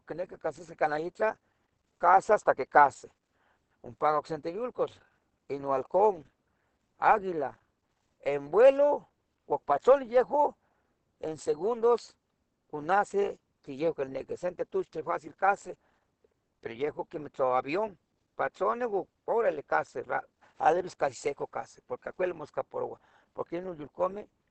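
Opus compression runs throughout, likely at a low rate around 16 kbps, where the encoder falls back to its speech-oriented SILK mode. The band stops near 8.6 kHz, and the speech sounds plainly muffled and hoarse.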